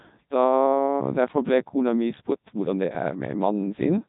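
Codec 2 vocoder damage runs throughout the speech: the waveform has been discarded and rebuilt from sine waves driven by pitch, voicing and a coarse spectral envelope, at a rate that fits its 3.2 kbit/s mode. The result sounds heavily robotic and buzzy, with nothing above 3.8 kHz.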